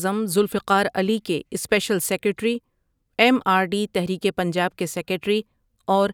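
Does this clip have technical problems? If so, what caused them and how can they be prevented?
No, there's nothing technically wrong to hear in this speech clip, so there's nothing to trace back or guard against here.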